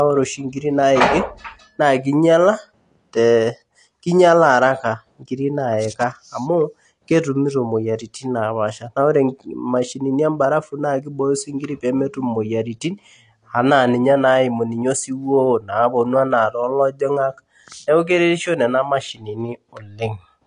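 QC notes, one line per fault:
Throughout: AAC compression. The speech has nothing above 9.8 kHz and sounds dull and smeared, with plainly audible warbling, fizzy texture on sibilants. The likely cause is AAC-LC at a low bitrate, consistent with 32 kbps, which lowers the cut-off and coarsely quantises the spectrum.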